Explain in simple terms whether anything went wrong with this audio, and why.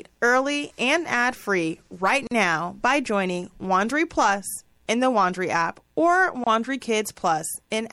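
MP3 compression, throughout the whole recording: the speech sounds watery and swirly, with smeared edges on sharp sounds. This is likely the result of squeezing the file hard, so the encoder dropped quieter detail it judged unimportant.

Gap at a join of encoded pieces, at 2.27 s and 6.44 s: the speech briefly drops to silence, for 42 milliseconds after "and ad free right" and for 27 milliseconds after "app or", then picks up where it stopped. The recording was encoded in separate chunks and joined back together, and the small stretches of silence each chunk carries at its edges were left in.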